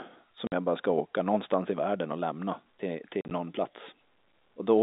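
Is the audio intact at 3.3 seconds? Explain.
No, 3.3 s falls inside a stretch of packet loss filled with silence running from 3.21 to 3.31 s. About 60 ms of that 100 ms drops out as gaps up to 40 ms long. They point to roughly 10 ms packets being replaced with silence, leaving hard-edged holes in the band-limited telephone sound.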